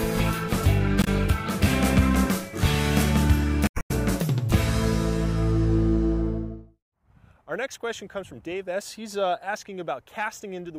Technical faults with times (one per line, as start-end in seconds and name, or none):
1.01-1.07 damaged data in a compressed stream
3.65-3.91 damaged data in a compressed stream